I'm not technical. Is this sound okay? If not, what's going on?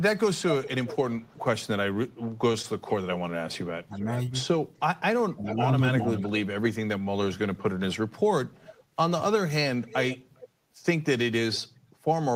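No. Three kinds of fault are audible.

Echo leak: a delayed copy of the speech, trailing it by about 0.4 s, is heard from 0 to 2.92 s, 3.98 to 4.05 s, 5.44 to 6.32 s and 9.86 to 10.48 s. The likely cause is a speakerphone on the other end whose echo canceller let some of the sound back into the microphone.

Short stall from a late packet: at 2.52 to 2.56 s and 2.62 to 2.66 s the sound is briefly held, stretched by about 18 ms and 16 ms. Each time, a piece of audio arrived late, and the receiver filled the gap by stretching the preceding sound. Nothing is lost.

Speech suppressed in double talk: from 3.87 to 4.09 s and from 5.34 to 6.31 s the talker's level dips noticeably, while the echo is also present. The likely cause is that both sides were talking at once, and the echo canceller turned everything down to fight the echo.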